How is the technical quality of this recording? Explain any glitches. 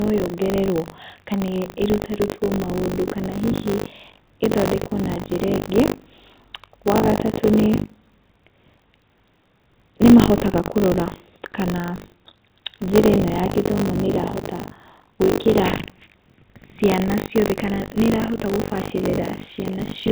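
The recording has a continuous glitch: buffer tearing runs through the whole speech clip, over a telephone-band signal that stops at 4 kHz. The writer and reader of the audio ring buffer have drifted and cross every period, so about a fifth of each buffer replays audio roughly 70 ms old, with hard joins. The result is a 50 Hz robotic buzz that rattles under the voice wherever there is signal.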